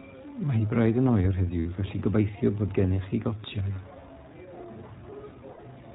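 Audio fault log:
throughout, iLBC codec: the speech has been through a narrowband VoIP codec working in 20 ms frames, at a rate that fits its 15.2 kbps mode, and each frame's excitation is coded on its own. Nothing above 4 kHz survives, so the voice is dull, a little rough and plainly synthetic.
1.60 to 1.66, 3.74, 5.52 to 5.60, lost iLBC frames: packets went missing, about 60 ms at the first and last points and 20 ms at the second. The decoder filled each gap by repeating the last pitch cycle mixed with noise, which is heard as a brief held, buzzy vowel. The voice comes back almost at once.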